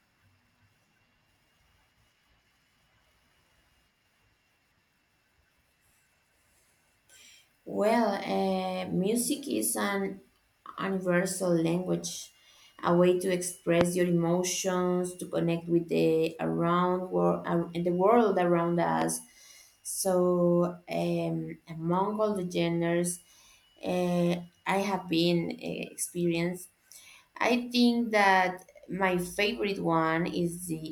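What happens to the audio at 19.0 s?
A loud pop hits at 19.02–19.04 s: a single sharp click, standing out about 15 dB above the surrounding speech, while the speech carries on underneath without a break. The likely cause is a brief voltage spike entering the signal chain, from a plug being moved, a switch, a static discharge or a driver glitch. The circuitry downstream smooths that jolt into a short pulse lasting about 25 ms.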